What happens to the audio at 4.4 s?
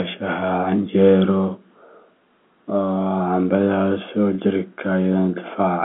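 At 4.35 to 4.38 s a packet loss with pitch repetition occurs: about 30 ms of audio, consistent with one lost packet, is filled by repeating the last pitch period, so the sound briefly holds as a faintly buzzy tone. The waveform shows identical repeated cycles, and the spectrogram shows frozen, evenly spaced harmonic stripes inside the telephone band below 3.4 kHz.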